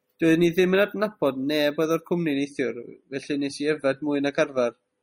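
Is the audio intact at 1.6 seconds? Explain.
Yes, the speech is intact at 1.6 seconds, with no fault to be heard at that moment.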